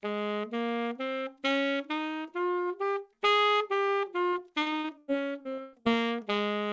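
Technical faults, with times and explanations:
3.86–3.90 s, short concealed packet loss: About 20 ms of audio failed to reach the decoder in time. The receiver covered the hole by extending the sound just before it, carrying on its pitch if it was tonal or its noise shape if not, then crossfading back into the real signal. What you hear is a brief smear or wobble, against a background already band-limited to nothing above 8 kHz, which fits a G.722 wideband call codec.
4.30–5.87 s, repeated packet loss (robotic sound): Over this stretch audio went missing again and again, in nine separate gaps totalling about 440 ms, the longest 112 ms. Each hole was patched by stretching the preceding sound, and the next dropout arrived before the signal had properly recovered, so roughly a quarter of the span is synthetic fill. The result is choppy sound with pieces cut out.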